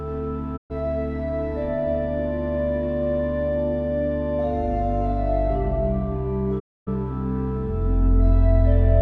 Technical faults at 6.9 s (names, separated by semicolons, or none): digital broadcast dropout